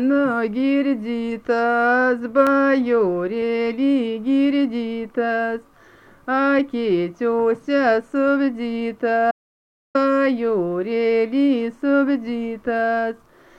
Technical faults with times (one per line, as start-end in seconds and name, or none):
2.47 block of digital silence
9.31-9.95 audio dropout to silence